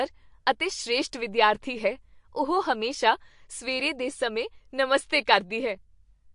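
The speech has a watery, swirling quality throughout, with a metallic chirping on the s sounds and softened, smeared consonant onsets, and the treble stops dead at about 10.6 kHz. That pattern is likely MP3 compression at a low bitrate, roughly 49 kbps. Short of bits, the encoder cuts off everything above a fixed frequency and drops the weaker spectral lines, which flicker in and out from frame to frame.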